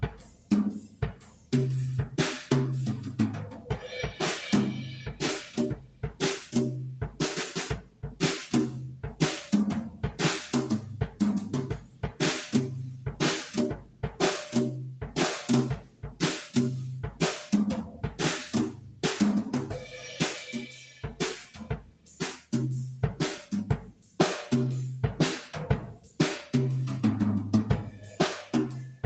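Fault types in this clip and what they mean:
Noise suppressor applied to music or sounds: a speech-tuned suppressor was left on for these sounds. It treats steady tones and ambience as noise, so held parts and tails get pulled down under the onsets, and the level keeps swinging by roughly 15 dB across the clip.
Sound cut by the noise suppressor: six stretches where it clamped down harder, around 0.04–1.53, 3.07–16.21, 17.86–22.53, 23.87–24.19, 25.93–26.19 and 27.89–29.04 s. Drops hit about 14 to 15 dB, with steady or fading sounds sinking or losing their decay.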